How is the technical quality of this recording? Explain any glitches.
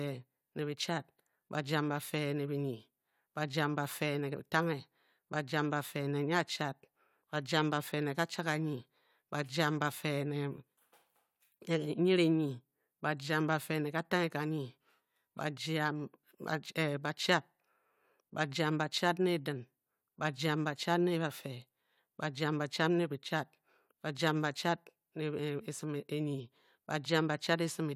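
No technical faults are audible anywhere in the speech recording, so there are no glitches to explain.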